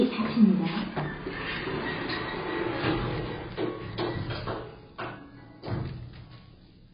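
Throughout, nothing is heard above 5 kHz. The sound is dull, smeared and warbling, consistent with heavy AAC compression, likely AAC-LC at around 16 kbps.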